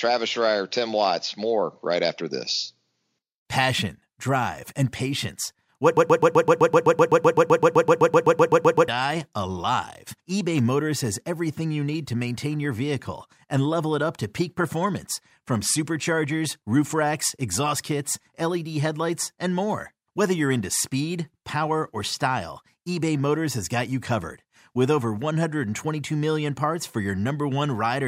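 At 5.97 s the speech gets stuck in a broken-record loop. The same 127.5 ms fragment repeats 23 times back to back, about eight times a second, until 8.88 s. The player or stream likely stalled and kept resending its last fragment, so the audio meant for that stretch is lost.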